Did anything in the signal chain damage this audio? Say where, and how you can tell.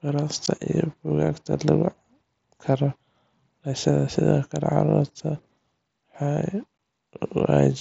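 Yes. Unconcealed Bluetooth headset packet loss on the wireless link. Speech drops out for 15 ms at 0.46 s and 6.78 s. The hard-edged gaps each fit two lost packets, replaced by silence or an idle pattern.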